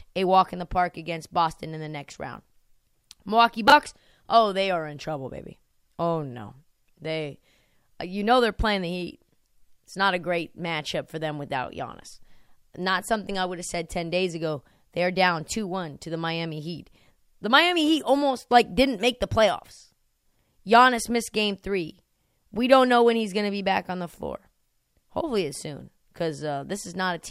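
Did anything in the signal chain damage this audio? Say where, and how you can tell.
Yes. There are chunks out of order at the buffer stage, from 3.68 to 3.72 s, just before "oh they are in". A brief jumbled blip is audible. One 20 ms chunk plays one chunk late, swapping places and leaving three hard joins.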